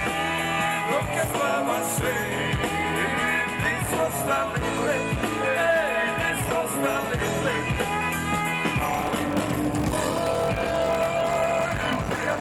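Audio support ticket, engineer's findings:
Block size mismatch (padded), 8.84 s to end of clip at 12.40 s. Steady buzz at about 46.9 Hz under the sound; playback slowed to 0.861x, pitch roughly unchanged. Probable component: block handoff between two processing stages. Mechanism: upstream stage writes short blocks and the downstream reader zero-fills the remainder of each block, inserting a brief gap every block. Buzz rate fits a 1024-sample read block; speed ratio suggests writes of around 880 samples.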